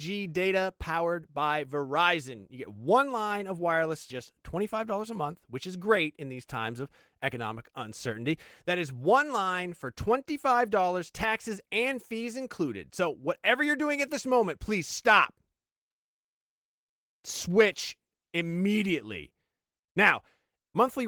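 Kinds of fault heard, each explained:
No technical faults can be heard in this speech.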